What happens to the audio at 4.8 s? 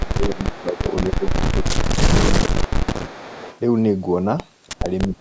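Speech suppressed in double talk occurs from 4.76 to 4.87 s. The talker's level sags by around 15 dB for about a tenth of a second, so the sound briefly thins and partly drops out before recovering. The likely cause is an echo canceller facing both ends talking at once: unable to separate the local talker from the returning loudspeaker echo, it attenuated everything, pulling this side's speech down along with the echo.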